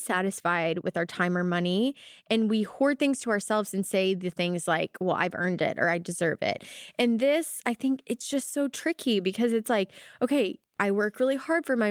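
Wi-Fi interference runs from 9.77 s to the end of the speech at 11.91 s. A Wi-Fi radio sitting near the audio circuitry transmits a beacon every 102.4 ms, and the circuit rectifies those bursts of radio energy into the audio band. The result is a steady ticking at roughly ten clicks per second underneath the speech. It sits faintly, around 50 dB below the speech.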